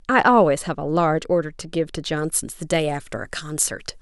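From 2.17 s to the end of the speech, the recording shows pre-emphasis left on: the treble lift applied before transmission was never undone by the matching de-emphasis. The shape of the boost fits the 75 µs curve used in FM broadcasting, and at 10 kHz the highs sit about 13 dB above their level at 1 kHz. The voice turns suddenly thin and over-bright, with sibilants hissing sharply and the lower body of the sound receding.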